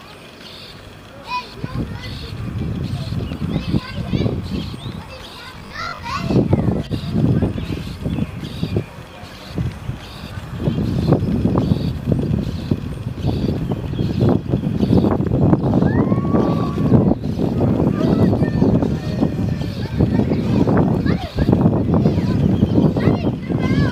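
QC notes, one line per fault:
5.59–6.07 s, robotic sound from repeated short buffers: the sound turns into a rigid, metallic 50 Hz buzz, likely because new audio arrived too seldom and the last 20 ms chunk was replayed to fill the gaps, with around two fifths of the stretch repeated instead of new.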